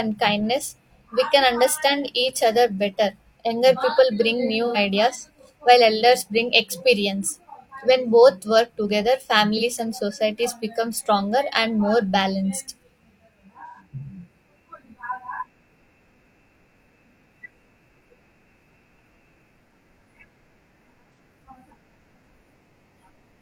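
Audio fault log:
4.66–4.77 s, 9.57–9.63 s, 13.66–13.80 s, 21.14–21.19 s: AAC frame loss with concealment. Compressed audio went missing and the decoder patched each gap by re-using the last good spectrum. The result is a brief smeared, noisy patch in the speech, just after "people bring" and between "both work together" and "and societies become stronger". The longer gaps of about 85 ms fit two lost frames, the shorter ones of about 43 ms a single frame. All are too short to fade to silence.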